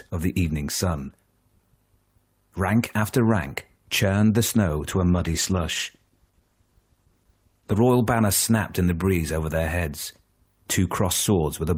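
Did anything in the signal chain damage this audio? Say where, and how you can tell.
Yes. A call bitrate drop at the codec stage, 4.91 to 7.87 s: the encoder coarsens and the sound turns rough, which fits a fall from about 32 to 14 kbps.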